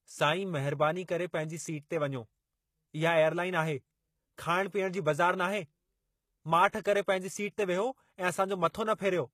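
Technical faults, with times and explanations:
Throughout, HE-AAC compression: the speech carries plainly audible codec damage of the kind that likely comes from HE-AAC at a low bitrate, around 20 kbps. Only the lower spectrum is coded properly, and the treble is rebuilt by copying lower bands upward under a coarse envelope, so harmonics fail to line up across the crossover and sibilants sound gritty or lispy. A spectrogram shows blocky, repeated patches in the upper region and nothing above 14.9 kHz.
6.71 s, pre-echo: a short hiss of about 27 ms comes just before the attack of "करे पंहिंजी सीट ते", softening its onset. The attack fell late in a transform block, and quantisation noise sized for the loud part was spread evenly across the whole block, filling the quiet moment ahead of it. On a waveform, low-level fuzz rises before the sharp onset. On a spectrogram, a broadband smear extends slightly to the left of the transient.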